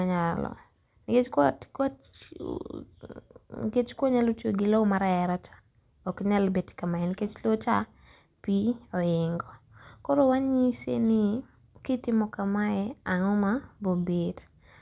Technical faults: none

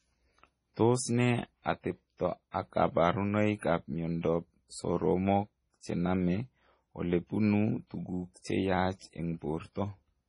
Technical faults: MP3 compression; pre-echo

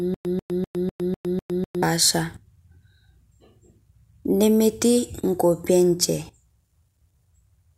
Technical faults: stutter with silent gaps

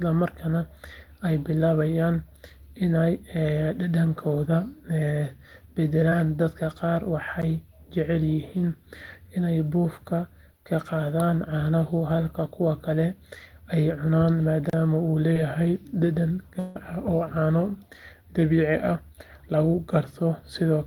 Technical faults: short concealed packet loss; block of digital silence; long network dropout

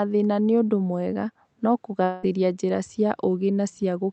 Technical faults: long network dropout

